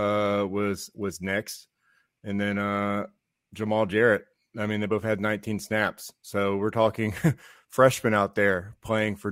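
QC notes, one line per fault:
Nothing stood out on listening.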